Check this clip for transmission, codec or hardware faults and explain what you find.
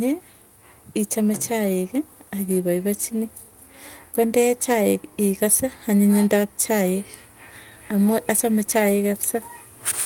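Nothing in this speech recording stands out as a fault, so there's nothing to report here.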